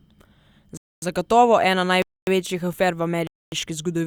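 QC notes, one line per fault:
0.77–3.52 s, gap between chunks: the speech breaks off for 250 ms at 0.77–1.02 s, 2.02–2.27 s (just before "afer v") and 3.27–3.52 s (just after "afer v"), with silence each time. The audio seems to arrive in 1-second blocks, and each block likely starts late, so a hole opens at every join. Unlike a dropout, nothing is lost: the speech resumes exactly where it stopped, and the holes recur every 1.25 s.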